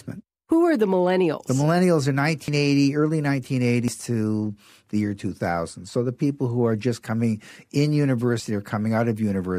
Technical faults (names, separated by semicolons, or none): dropped buffer (overrun)